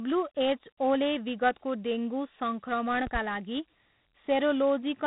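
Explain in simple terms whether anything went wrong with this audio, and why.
Dialogic VOX ADPCM runs through the whole recording. This old telephone format stores each tiny slice of speech as a rough 4-bit step from the last one, leaving gritty hiss trailing the voice, and nothing above about 3.9 kHz, which fits 8,000 samples a second.

A loud pop comes at 3.07 to 3.19 s as two sharp clicks, clearly louder than the speech, which carries on underneath. Most likely a sudden electrical jolt, from a plug, switch or static, briefly entered the signal.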